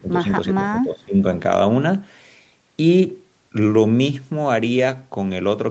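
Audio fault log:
0.00–0.29 s and 0.55–1.23 s, speech suppressed in double talk. The speech dips and breaks up in patches, by about 15 dB in the first stretch and about 20 dB in the second. The likely cause is an echo canceller mistaking the talker for loudspeaker echo while both sides talk, and turning the talker down.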